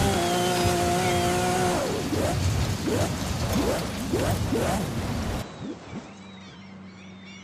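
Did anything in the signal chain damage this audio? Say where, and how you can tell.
Yes. From 5.42 s to the end, the sound abruptly turns duller and boxier and drops roughly 10 dB in level, with no gap at the transition. Above 8.2 kHz the spectrum is empty, and a new, faint background noise appears, roughly 35 dB below the signal. At the capture-device stage, this is likely an input switched to a poorer device. The system swapped inputs mid-recording, and the new device brought its own narrower band, tone and noise floor.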